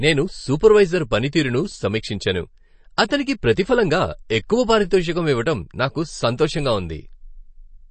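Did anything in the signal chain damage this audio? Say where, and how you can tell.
Yes, at the codec stage, across the whole clip. The speech sounds watery and swirly, s sounds carry a metallic chirp, consonant attacks are smeared, and nothing is present above about 8.3 kHz. This is likely MP3 compression, and the damage points to a low bitrate around 32 kbps. Starved of bits, the encoder cuts the treble at a fixed point and drops weaker frequency lines, which flicker on and off between frames.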